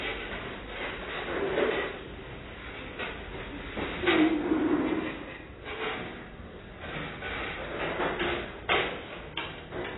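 AAC compression runs throughout the clip, likely the cause of its heavy damage. Nothing survives above about 3.9 kHz, which points to AAC-LC at a very low bitrate near 16 kbps, leaving the sound dull and smeared, with a warbling, fizzy texture.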